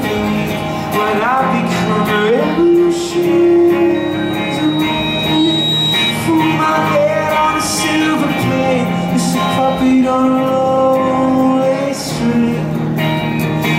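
At 3.94 s the loop closes: a microphone picks up the loudspeaker it feeds, and at 3.8 kHz the gain exceeds one. The result is a loudspeaker feedback squeal, a single tone swelling over about two seconds to roughly the sound's own level before stopping at 6.14 s.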